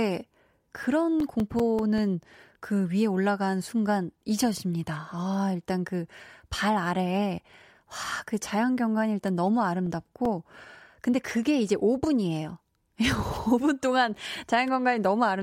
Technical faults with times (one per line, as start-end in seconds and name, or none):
1.01-2.18 CD scratch ticks
9.28-10.64 CD scratch ticks